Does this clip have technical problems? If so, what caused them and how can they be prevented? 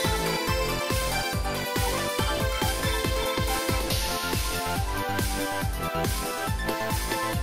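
No, there are no technical problems to report here.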